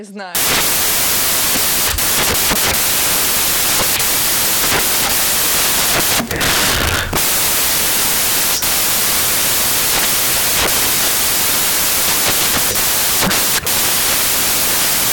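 From 0.35 s to the end, samples are built from the wrong bytes. Fast-changing low bits become each value's large part, producing loud, harsh broadband noise, close to white on loud sounds.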